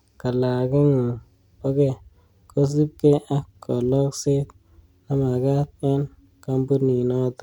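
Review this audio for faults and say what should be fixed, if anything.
Nothing stood out on listening to this speech recording, so there is nothing here that needs fixing.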